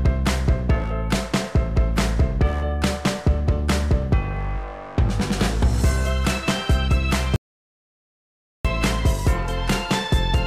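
At 7.36 s the sound cuts off abruptly and stays gone until 8.65 s, an audio dropout to silence lasting about 1.29 s. The gap is silence with no room tone, so on a waveform it appears as a flat line, and on a spectrogram as a fully black band across every frequency with hard vertical edges. The likely cause is a momentary loss of the input signal while recording continued, writing silence, so whatever occurred during that stretch is lost.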